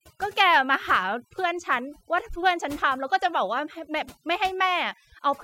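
From start to finish, the background between phrases drops to an unnatural near-silence scattered with twinkling specks. This is overdone noise removal: a noise reduction stage applied far too aggressively to a noisy recording. Wherever a frequency band came close to the tool's noise estimate, it was pushed down hard or shut off, taking quieter parts of the speech along with the noise.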